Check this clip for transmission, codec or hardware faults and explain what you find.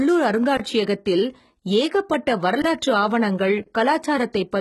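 One codec fault runs through the whole speech clip.

HE-AAC compression, from start to end: the damage is heavy, and the sound likely comes from HE-AAC v2 at a low rate, which fits a bitrate around 16 kbps. Only the lower band is truly coded. The treble is rebuilt by copying lower bands upward under a coarse envelope, so its harmonics do not align with those below. Nothing reaches above 11.8 kHz, and s sounds come out gritty, metallic or lispy rather than clean.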